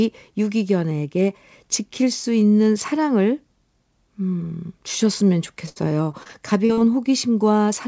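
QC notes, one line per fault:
5.66–6.79 s: repeated packet loss (robotic sound). Seven holes, longest 68 ms, patched by extending prior sound. Result is choppy speech with pieces missing.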